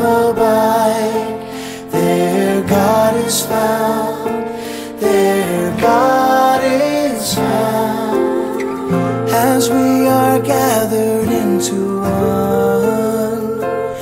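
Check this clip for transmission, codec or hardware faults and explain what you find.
No transmission, codec or hardware problems can be heard anywhere in the clip; the signal stays continuous throughout.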